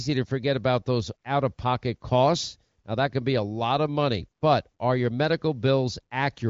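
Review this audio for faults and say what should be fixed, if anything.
Nothing stood out on listening to this speech, so there is nothing here that needs fixing.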